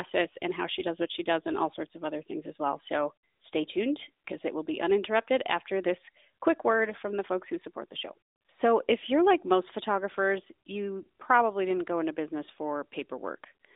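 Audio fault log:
No faults are present in this speech clip. The AMR narrowband mobile codec path confines the audio to a telephone band of roughly 300 Hz to 3.7 kHz, with the light coding texture expected of its top 12.2 kbps mode.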